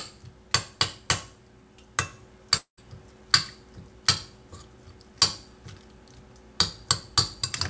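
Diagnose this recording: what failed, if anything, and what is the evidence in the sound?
From 2.57 to 2.80 s the sound smears into a fading buzz, falls to 120 ms of silence, then resumes with 210 ms missing. It is a long network dropout, likely lost packets, with the receiver's concealment stretching the last audio before going quiet.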